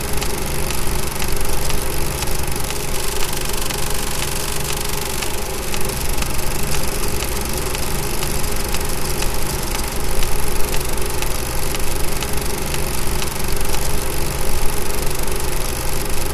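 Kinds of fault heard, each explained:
No technical fault can be heard in this audio. Nothing in it calls for an explanation of a fault.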